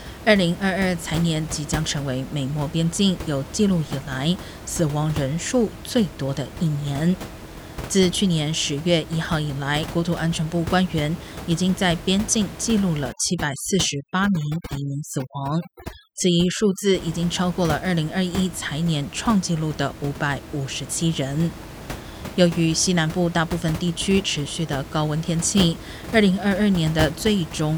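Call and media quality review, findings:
Overdone noise removal, 13.12–16.95 s: background drops and breaks into twinkling specks. Suppressor too aggressive, zeroing bands near its noise estimate and taking quiet speech detail too.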